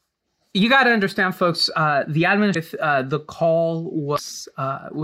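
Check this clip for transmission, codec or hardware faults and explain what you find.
The speech carries one kind of fault, damaged data in a compressed stream, at 2.51–2.56 s and 4.14–4.19 s. Corrupted bytes make the decoder misread frames and lose sync until it finds the next frame header, producing a brief chirp, squawk, click or short hole.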